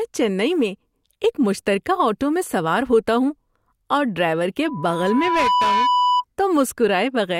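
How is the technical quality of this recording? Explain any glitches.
The recording has one clear problem: a loudspeaker feedback squeal. It starts at 4.63 s, right after "اور ڈرائیور", and lasts until 6.25 s. A pure tone near 991 Hz swells over about a second until it is roughly as loud as the speech. The microphone was picking up a loudspeaker it was feeding. At that frequency the loop gain went above one, so the tone kept reinforcing itself. It then stops, which fits the loop being broken.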